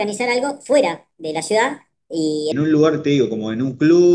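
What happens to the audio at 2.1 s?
At 2.1 s the speech is still in a wrong sample rate section running from 0.0 to 2.52 s. Playback that fits 16 kHz material run at 22 kHz makes it 1.38 times faster and 5.55 semitones higher, sounding hurried and chipmunk-like.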